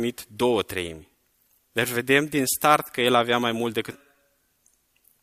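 At 3.91 to 3.94 s, just after "el avea mai mult", the speech jumps abruptly forward with a brief blip, so the continuity of the sentence breaks. This is likely a stream segment skipped, where one chunk failed to load and playback resumed at the next.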